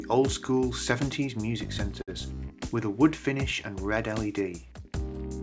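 At 2.02 to 2.10 s, a short stall from a late packet: the jitter buffer ran dry, so the receiver held the last sound for about 58 ms before resuming intact, adding 58 ms of delay. It sounds like a held sound with a slight buzz or dip; spectrogram bands smear flat, below the 8 kHz ceiling.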